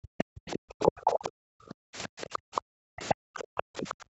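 From 0.00 to 0.74 s the background is gated by the echo canceller. For roughly half a second the room sound is pulled down by about 40 dB. The waveform's noise floor flattens almost to silence, and the spectrogram shows a dark gap where the ambience should be.

From 0.18 to 1.29 s the other side's voice leaks through, about 20 dB below the talker. It is faint speech that the echo canceller likely failed to remove, visible as weaker harmonic traces layered under the main voice.

From 1.02 to 1.41 s the speech is suppressed in double talk. The canceller likely ducks the talker by as much as roughly 40 dB over about 150 ms in total. The waveform shows bitten-out chunks, and the spectrogram shows brief vertical holes through the voice's harmonics.

From 1.69 s to the end the background is gated again, with dips of about 40 dB. During that stretch fainter leakage returns at 2.22 to 2.61 s, at 3.08 s and at 3.57 to 3.94 s, about 25 to 30 dB down. 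Across the call path the spectrum stops at 8 kHz.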